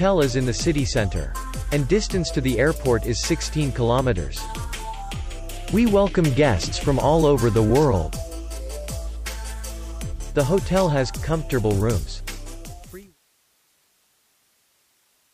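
There are no technical faults to describe in time order, and the sound simply eases out in a smooth fade from around 12 s to 13.19 s.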